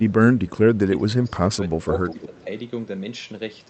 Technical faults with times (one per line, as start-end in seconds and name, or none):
0.00-2.47 speech suppressed in double talk
2.07-2.44 echo leak